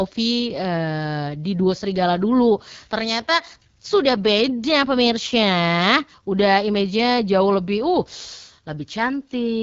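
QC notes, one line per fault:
Throughout, AMR wideband (HD Voice) codec: the speech has a plainly audible rough, raspy grain. That is what a pulse-driven vocal tract model produces when pushed to one of its lowest rates, and it points to roughly 8.85 kbit/s. Nothing sits above 7.5 kHz, and the top band sounds like shaped hiss rather than real detail. That sets it apart from narrowband phone coding, which stops near 3.4 kHz, and from a clean low-pass filter.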